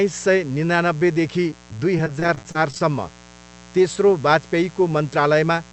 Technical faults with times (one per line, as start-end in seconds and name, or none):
0.00-5.72 mains buzz
1.50-2.81 repeated packet loss (robotic sound)